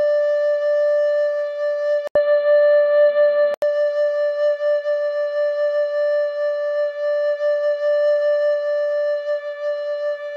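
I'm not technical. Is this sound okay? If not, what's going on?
No. Input switched to a poorer device, likely, from 2.07 to 3.62 s: after a brief 80 ms gap, the music turns dull and boxy with nothing above 4.5 kHz, the level shifts, faint new background noise appears, then full clarity returns.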